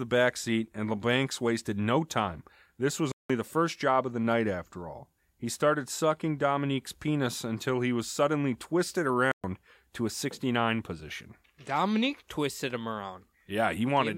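At 3.12 s and again at 9.32 s the speech cuts to silence for about 0.18 s and 0.12 s, then resumes; a playback stall, likely from the player starving for data.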